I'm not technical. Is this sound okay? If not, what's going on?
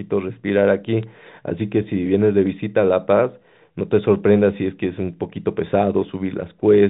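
No. At about 1.03 s there is a very brief fault. This comes from bit errors on a digital phone line. The phone line carries the speech as numbers. A few bits got flipped, so a tiny piece of sound jumped out of place.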